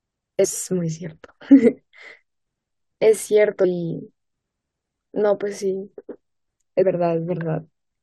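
Compressed frames were skipped at 0.44 s, 3.64 s and 6.81 s: runs of roughly 21 ms frames were lost (about 100 ms, 40 ms and 100 ms of audio), so the speech jumps forward.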